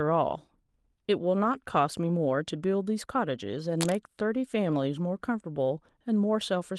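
From 1.43 to 1.53 s, a lost packet rebuilt from error correction: the sound turns briefly rougher and noisier but never drops out, unlike a concealed gap, which fits about 60 ms of lost 20 ms packets. From 3.79 to 3.96 s, cable scratch noise: dense, uneven rustling only a little below the speech level, likely from a worn cable or connector being moved, rather than isolated clicks.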